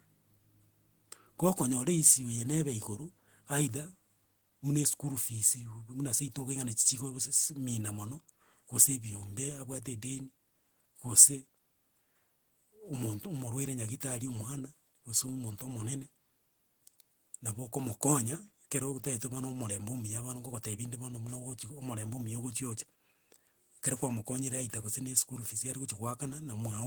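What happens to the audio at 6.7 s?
At 6.7 s the speech continues without any audible fault: no dropout, click, distortion or other disturbance breaks into the sound at that moment.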